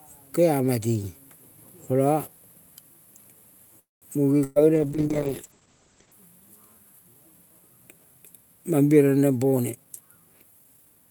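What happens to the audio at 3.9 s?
A call audio freeze runs from 3.79 to 4.05 s: the last sound is stretched into a brief fading buzz, then about 180 ms of silence, likely from delayed packets draining the jitter buffer. Nothing is lost; the audio resumes where it stopped, about 224 ms later. The spectrogram shows a smeared, decaying band then a blank gap, and the waveform shows a tapering tail then a flat line.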